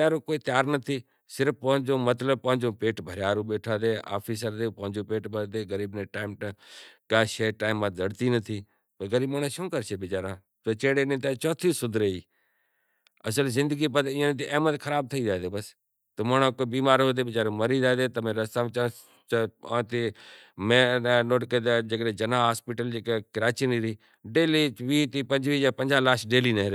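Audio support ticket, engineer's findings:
Nothing stood out on listening to the speech recording, so there are no findings to log for this ticket.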